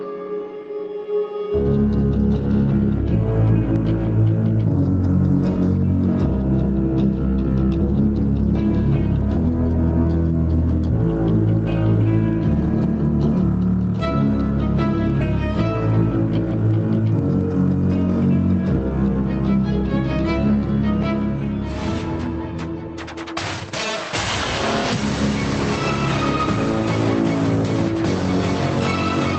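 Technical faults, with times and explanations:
Throughout: gain pumping. The input gain was likely set far too high, so a fast limiter or compressor clamps down on every loud sound, swinging the level by roughly 10 dB. The audio is left squashed.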